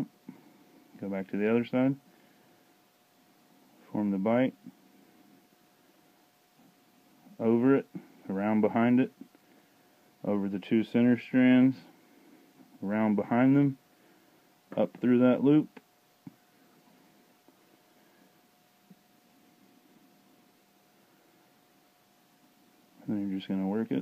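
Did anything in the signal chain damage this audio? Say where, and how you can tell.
No, no chain damage audible.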